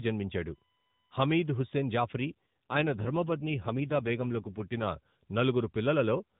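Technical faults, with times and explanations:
2.70–4.88 s, AMR rate drop: the speech turns rougher and more synthetic, which fits the network shifting AMR from 12.2 to about 5.9 kbps for error protection. On a spectrogram, harmonics blur under the unchanged 4 kHz ceiling. The waveform shows no gap.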